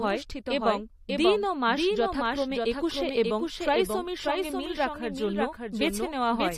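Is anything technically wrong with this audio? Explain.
Yes. Throughout the speech there is a doubled audio track: the signal was likely captured a second time through a slower path, so a full-band copy about 5 dB quieter trails roughly half a second behind, a clean echo without decay or room colour.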